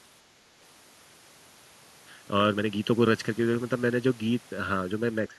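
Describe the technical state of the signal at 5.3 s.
At 5.3 s one channel is running late by roughly 0.7 ms, and when the two are folded to mono the shared part cancels at evenly spaced frequencies, starting near 700 Hz. This channel delay (comb filtering) is present across the whole clip, so here too the speech carries fixed spectral notches that leave it hollow and phasey.

From 5.27 s to the end of the clip at 5.39 s, the echo canceller most likely faced double talk. Unable to separate the near talker from loudspeaker echo, it pulled both down. This speech suppressed in double talk shows as a duck of about 20 dB lasting roughly a tenth of a second.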